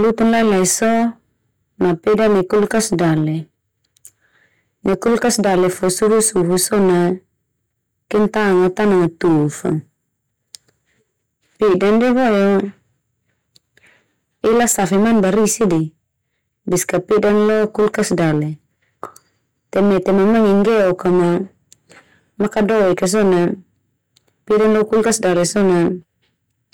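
Hard clipping runs through the whole speech clip: the signal is driven about 9 dB past what the stage can pass, so something like a sixth of the samples get their peaks sliced flat. Those flat tops spray high harmonics, giving a harsh fuzz on every loud syllable.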